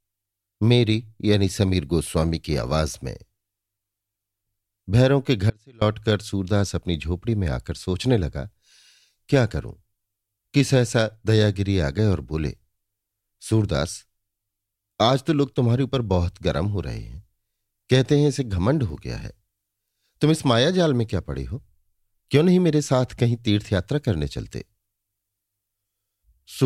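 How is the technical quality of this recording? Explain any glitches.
The recording has one clear glitch, an audio dropout to a faint residue from 5.5 to 5.82 s. For about 0.32 s the speech abruptly collapses to a faint residue, roughly 30 dB below its normal level, then snaps back mid-flow. The likely cause is a brief loss of the signal feed while the downstream path stayed live. The hard edges at both ends rule out a natural pause or a fade, and the faint residue shows it isn't total silence.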